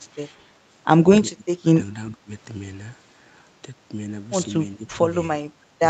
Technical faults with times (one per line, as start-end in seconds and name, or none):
1.34-1.69 speech suppressed in double talk
2.12-2.30 speech suppressed in double talk
4.77-5.00 speech suppressed in double talk